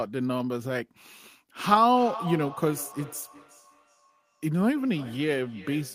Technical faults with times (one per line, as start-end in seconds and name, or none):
1.69-5.95 feedback echo between two devices